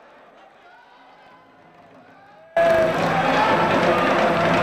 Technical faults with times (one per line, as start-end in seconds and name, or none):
0.00-2.56 audio dropout to a faint residue